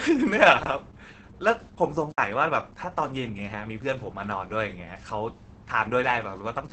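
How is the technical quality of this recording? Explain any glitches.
Technical quality is poor: heavy codec damage throughout, plus two dropouts.

Opus voice compression runs throughout. The SILK coder's coarse excitation makes the speech muffled and hoarse, with nothing above 8.7 kHz, which fits a bitrate near 10 kbps.

An underrun with a held sample occurs at 0.63 to 0.66 s and at 2.12 to 2.18 s. The output stalls flat, then resumes, having skipped about 30 ms and 70 ms of speech respectively.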